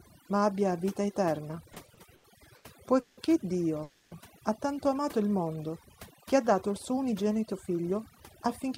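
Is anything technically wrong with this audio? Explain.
Yes. Four technical faults can be heard in this speech.

Overdone noise removal runs through the whole clip. A noise reducer set far too strong cuts individual frequency bands whenever they sit near its noise estimate, taking quiet parts of the voice with them. The background drops and breaks up into twinkling specks.

Repeated stalls (stutter) occur between 1.73 and 3.19 s. Late-arriving packets left the jitter buffer empty six times, and each time the receiver stretched the last sound until audio resumed. About 420 ms was filled this way, roughly 29% of that span, with the longest hold lasting 170 ms. Nothing is lost, but the speech drags and stutters.

A call audio freeze occurs from 3.83 to 4.13 s. The last sound is held and carried on for 280 ms, with no drop to silence, and the speech then continues from exactly where it stopped, now 280 ms later. 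The likely cause is packets held up in transit that emptied the jitter buffer and forced the receiver to bridge the wait.

A jitter buffer speed-up runs from 6.90 s to the end. Having built up more delay than it targets, the receiver trimmed many short pitch-period-length pieces, removing about a fifth of a second in total. The speech plays at 109% speed with its pitch unchanged, which makes it sound hurried.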